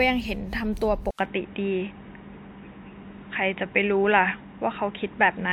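From the very start, the speech has a swirly, smeared character. Consonant attacks blur and the tone sounds hollow. Nothing is heard above 18.9 kHz. This is generation loss. Each lossy decode and re-encode quantises the signal again on a shifted frame grid, so noise and spectral gaps pile up. The damage here is heavier than one pass at a decent bitrate would leave. It fits speech that was likely run through WMA at around 128 kbit/s about four times.

At 1.11 s there is a brief gap of about 80 ms. The sound then turns dull and boxy and stays that way to the end. Nothing above 3.8 kHz gets through after this point. The level also shifts by a few dB, and a faint new background noise sits well below the speech. This is an input switched to a poorer device. The recording likely jumped mid-stream to a narrower-band microphone or a headset call profile.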